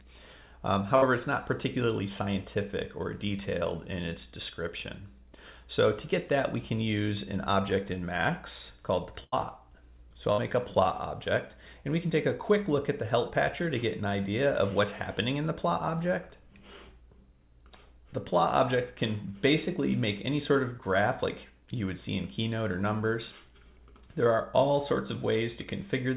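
At 0.96 s, 9.24 s and 10.32 s, a burst of packet loss leaves gaps of 58, 84 and 58 ms. Each is filled by extending the last sound as it fades. Unlike a dropout to silence, the audio then resumes with 60, 80 and 60 ms skipped.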